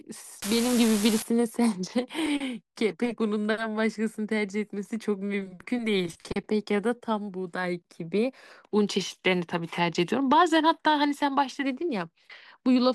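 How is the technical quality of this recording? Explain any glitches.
One glitch stands out near the start. From 0.42 to 1.22 s an unreliable data bit, one marginal line in the digital path, flips in a random share of samples. Each flip adds a spike of identical size, about -18 dBFS, heard as a steady crackling fizz that persists through pauses in the speech.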